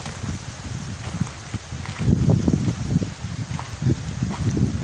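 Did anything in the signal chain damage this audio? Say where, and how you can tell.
No, nothing in the signal chain damaged this audio.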